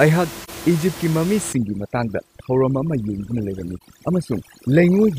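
AAC frame loss with muting at 0.44 to 0.49 s leaves a short, soft-edged gap in the speech. The decoder lost a frame and filled it with silence, and the overlapping transform windows fade the sound out and back in rather than cutting it. The gap's length fits a single lost frame of about 43 ms.

Overdone noise removal runs from 1.53 s to the end. The room noise, about 14 dB below the speech, is suppressed too hard. Each frequency band is pulled down or shut off whenever its level falls near the tool's noise estimate, so the background drops and breaks up into twinkling specks. Quieter parts of the speech spectrum are removed along with it.

AAC frame loss with muting recurs at 3.78 to 3.82 s, inside the over-processed stretch. This is another single dropped frame replaced with zeros and faded at both edges, so it is heard as a brief soft dropout.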